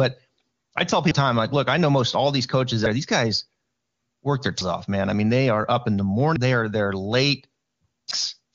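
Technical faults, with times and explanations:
1.11, 2.86, 4.61, 6.36 and 8.11 s, audio missing between chunks: the speech skips abruptly every 1.75 s, each time dropping about a third of a second and splicing the two sides together without silence. The likely cause is recording in 2-second chunks and losing audio at each handover.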